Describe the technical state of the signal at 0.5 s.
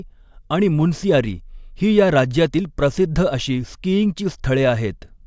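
At 0.5 s the speech signal is intact, with no audible fault at that moment.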